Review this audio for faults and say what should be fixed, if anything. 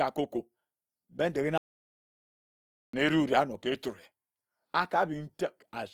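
The speech sounds grainy and rough throughout, with tones turning noisy rather than swirly, likely Opus compression in its music mode at a rate that fits about 24 kbps. Raising the encoding bitrate or switching to a higher-quality codec setting would prevent this.

From 1.58 s to 2.93 s the sound cuts to total silence for about 1.36 s, with no room tone, likely an audio dropout to silence from lost input. Securing the input connection and watching recording levels for sudden flatlines would prevent this.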